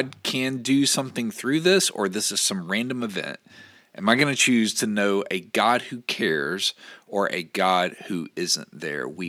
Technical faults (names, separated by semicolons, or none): none